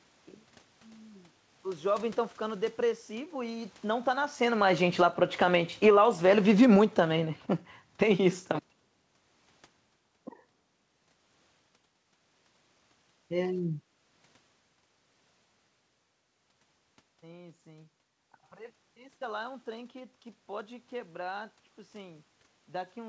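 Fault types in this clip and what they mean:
Automatic gain falling: the automatic gain control judged the input too loud or its background noise too strong and pulled its gain down by about 10 dB between 2.81 and 8.68 s, so the speech starts loud and then sinks gradually, with the room's background noise sinking along with it.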